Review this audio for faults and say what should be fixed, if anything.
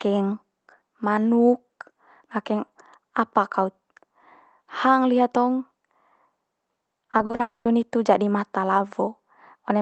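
From 6.95 to 7.41 s the speech turns choppy and robotic, with six short holes, none longer than 40 ms, each patched by stretching the previous sound. About a third of that stretch is filled in. This is repeated packet loss over the call path. A larger jitter buffer and forward error correction, or a steadier network link, would prevent it.

From 7.41 to 7.67 s, just before "hitu jadi mata", the audio fades into a brief buzz and then about 160 ms of silence, with 240 ms never played. This is a long network dropout, likely caused by the connection stalling. A more reliable network route or redundant transmission would prevent it.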